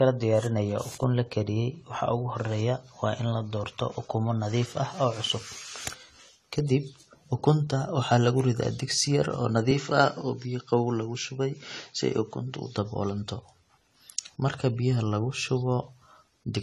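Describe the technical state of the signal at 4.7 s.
At 4.7 s, as across the whole clip, the speech likely went through low-bitrate AAC compression, consistent with about 32 kbps; nothing remains above 14 kHz, leaving it dull, smeared and audibly warbly.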